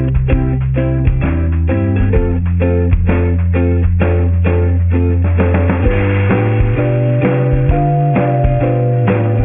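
Aliasing runs through the whole clip. Content above 3 kHz has folded back below it, which points to a drop to about a 6 kHz rate with no anti-alias filter. The folded tones, roughly 20 dB under the signal, sound gritty and metallic rather than simply dull, as clean band-limiting would.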